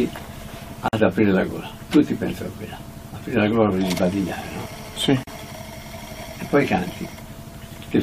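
At 0.88 s there's a gap at a join of encoded pieces: the sound drops out for about 48 ms and then resumes where it left off. That's what you get when separately encoded chunks are butted together without trimming the encoder's start-up delay and last-frame padding. From 3.85 to 5.50 s a GSM phone buzz comes in, a hard, raspy 217 Hz drone full of harmonics, sitting about 20 dB under the signal and holding steady, as it does when a nearby 2G phone is on a call and its radio bursts get rectified in the audio circuitry. Under that buzz, at 5.23 s, there's a second join gap of about 39 ms, with the same smeared edges.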